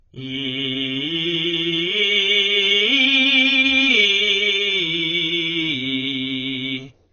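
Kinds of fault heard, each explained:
AAC compression: The music was likely squeezed through a low-bitrate AAC-LC encoder, which throws away most of the spectral detail to save data, and the heavy damage fits a rate around 16 kbps. Nothing survives above 6.5 kHz, so the top end is missing and the whole clip sounds dull. The coarse quantisation smears transients and leaves a watery, fizzy warble on sustained tones throughout.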